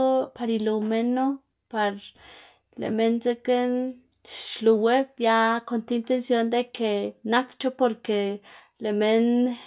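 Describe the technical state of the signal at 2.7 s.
At 2.7 s the speech signal is intact, with no audible technical fault at that moment.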